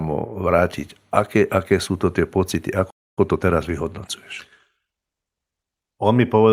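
A playback stall hits this speech clip at 2.90 s, right after "sú to tie pocity". The sound cuts out mid-flow and stays silent for about 270 ms, until 3.19 s. It then resumes. A gap like this is heard when the player has nothing left to output, most likely because its buffer ran dry or the thread feeding it was held up. Time-compressed catch-up follows from 3.19 s to 5.85 s. Once playback restarts, the speech runs about 1.1 times faster than normal while keeping its pitch. The player is working off the backlog built up during the stall by trimming out short slices and cross-fading across the joins. Those repeated splices continue until the rate settles at 5.85 s.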